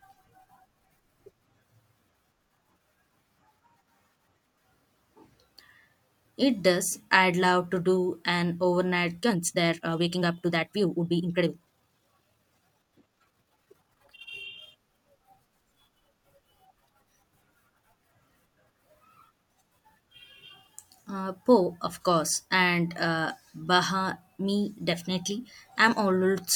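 From 9.18 s to 14.30 s the speech runs through a time-stretched section. The pace jumps abruptly to about 1.51 times normal, yet the pitch stays where it was. Delivery turns rushed. The likely cause is software squeezing this stretch to fit a shorter length, dropping short slices of audio to keep the pitch steady. At 14.30 s the pace returns to normal.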